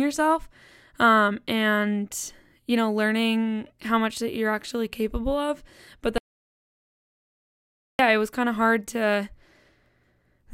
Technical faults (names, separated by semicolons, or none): audio dropout to silence